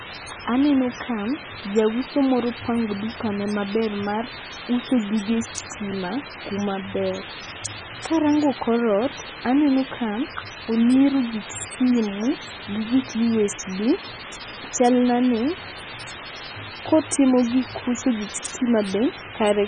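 A speech clip runs throughout with two faults. The first is low bit depth with dither. A constant, even hiss sits under the whole recording. It is loud, only about 10 dB below the speech. The hiss stays steady and brings no distortion with it. Dither was added before the signal was rounded to very few levels, which turns the rounding error into white noise. The noise level points to roughly 5 bits. The second fault is heavy codec damage, likely from MP3 compression. The sound is watery and swirly. Attacks smear. Nothing remains above 9.3 kHz, so the top of the spectrum is cut flat. Weak frequency components switch on and off from frame to frame as the encoder runs short of bits and drops them. The strength of this damage fits a very low rate, around 16 kbps.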